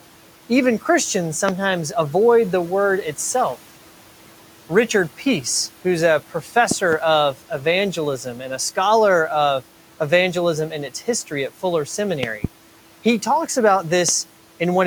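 At 1.49 to 1.51 s a single loud pop jumps out of the speech, peaking well above the speech level. It is most likely a voltage step from a connector, switch or static discharge. The pulse is shaped by the downstream circuitry into a short, hard thump, and the speech continues underneath it.

From 6.30 to 6.55 s the speech is cut by the noise suppressor. For roughly 150 ms within that span the suppressor treats part of the speech as background and pulls it down by up to about 10 dB, along with the room noise that otherwise sits around 20 dB below the speech. Those sounds come across as swallowed and faint rather than clearly spoken.

The remaining pops follow the same pattern. At 6.71 to 6.95 s there are two pops close together, about 15 dB above the speech level. Two more come at 12.23 to 12.47 s, about as strong as the first. A final single pop lands at 14.09 to 14.11 s.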